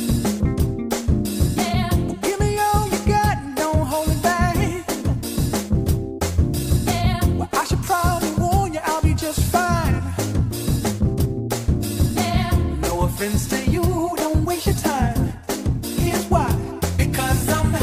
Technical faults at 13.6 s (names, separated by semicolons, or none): none